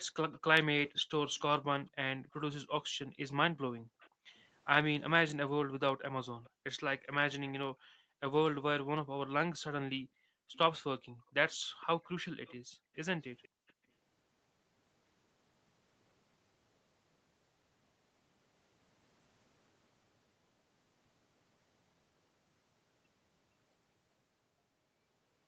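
Speech recorded over a call path that tops out at 8 kHz has an echo leak at 0.32–4.4 s, 6.43–6.5 s and 10.53–13.73 s. A faint copy of the voice returns 469 ms late, about 25 dB below the speech at first and about 30 dB below later. This is likely loudspeaker pickup that the echo canceller failed to remove. The background is also gated by the echo canceller at 0.92–4.34 s, 6.5–8.2 s and 9.95–13.76 s. The room sound is pushed down by up to about 40, 34 and 37 dB respectively, for roughly a second, half a second and a second and a half in total, as the canceller suppresses the microphone.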